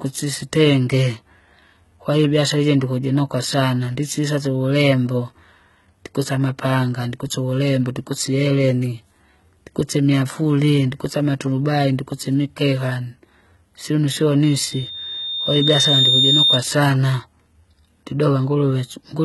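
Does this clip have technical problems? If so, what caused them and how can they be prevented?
Yes, two. Across the whole speech clip the top end sounds synthetic: everything stops near 11.8 kHz, and the treble that remains is gritty and metallic, with s sounds going lispy. That's likely HE-AAC compression, which codes only the lower spectrum and fakes the highs by copying lower bands upward under a rough envelope, so the harmonics don't line up. The heavy damage fits a very low bitrate, around 16 kbps. To prevent it, encode at a higher bitrate or use plain AAC or Opus for speech.

The second is loudspeaker feedback squeal from 14.43 s to 16.63 s: a single tone at 3.6 kHz swells up over about a second and a half and ends up around 5 dB louder than the speech before it cuts off. The mic was hearing the speaker it fed, and at 3.6 kHz the loop gain went past one, so that frequency kept feeding itself. 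To prevent it, keep mics behind and off-axis to the speakers, lower the monitor gain, or notch out that frequency.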